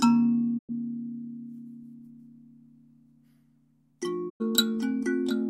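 A recording of everyday sounds with two digital broadcast dropouts, at 0.57 to 0.71 s and again at 4.28 to 4.42 s. Each time the audio fades out over about 20 ms, sits silent, then resumes further on, with roughly 96 ms of material simply gone, which points to a few corrupted frames being muted by the receiver. Unlike packet-loss concealment, nothing is repeated or smeared to fill the gap; it is a clean, faded hole.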